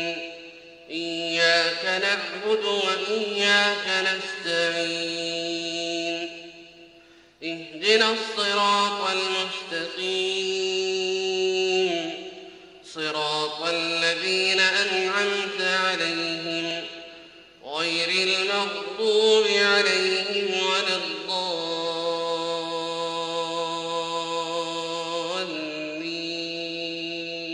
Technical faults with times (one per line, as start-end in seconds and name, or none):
3.85 dropped buffer (overrun)
16.71 dropped buffer (overrun)